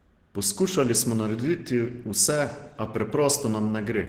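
From start to end the speech sounds muffled, hoarse and grainy, likely Opus compression in its hybrid speech mode at a rate fitting about 16 kbps. A spectrogram shows energy reaching 20.3 kHz, but the upper bands look smeared and noise-filled rather than detailed.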